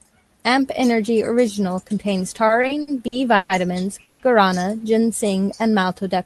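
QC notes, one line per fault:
2.47 to 3.52 s, repeated stalls (stutter): the audio halts six times, with 300 ms filled in total and the longest gap 130 ms. Packets arrived late, so the receiver kept stretching the last sound. Nearly a third of this span is filler, but nothing is lost. It drags and stammers.
4.01 to 4.22 s, call audio freeze: the sound hangs for 180 ms as a fading continuation of the last moment, never reaching silence, then resumes where it stopped. The likely cause is packets held up in transit, which emptied the jitter buffer and pushed the delay 180 ms later. Nothing is missing.
5.01 to 5.95 s, jitter buffer slow-down: this stretch plays at about 90 percent speed, with 102 ms added. The pitch stays the same. The buffer was rebuilding its reserve by repeating single pitch periods and pause fragments. Sounds are drawn out.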